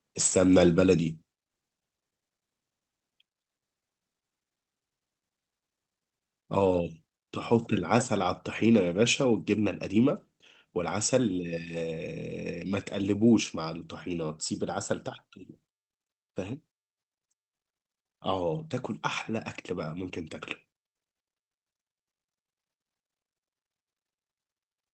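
At 1.23 s the speech and the background behind it drop together in one sudden step, about 4 dB quieter, and stay at that lower level. The change is abrupt, not a gradual fade, and everything in the audio drops by the same amount. The likely cause is a microphone volume stepped down: the call software judged the input too hot and lowered the device's input gain in one step. The speech arrives through the WebRTC call path, where its top end stops near 8 kHz.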